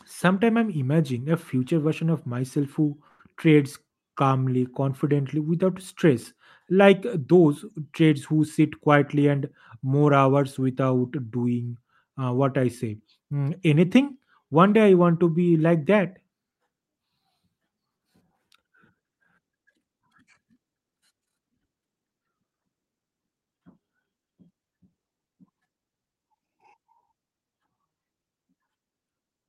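At 3.07 s, right after "version of myself who", a burst of packet loss cuts into the speech until 3.21 s. The receiver filled about 115 ms by extending the last sound and fading it, giving a held, thinning buzz, then jumped ahead to "trades calmly confidently without", so about 120 ms of speech is simply gone. On a spectrogram, frozen horizontal harmonics dim before an abrupt restart; the waveform shows a repeating, shrinking cycle.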